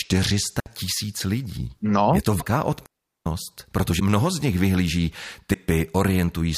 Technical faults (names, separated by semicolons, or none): digital wireless dropout; broken MP3 bit reservoir